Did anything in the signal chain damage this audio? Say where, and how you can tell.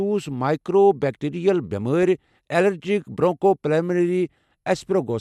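Yes: a corrupt frame decoded at the codec stage. At 1.03 s a brief burst of misplaced energy reaches about -25 dBFS, seen as a misplaced vertical smear on the spectrogram from damaged frame bits.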